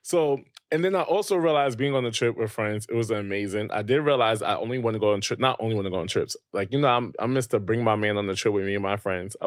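No technical faults turn up anywhere in the speech, so there is nothing to place in time order.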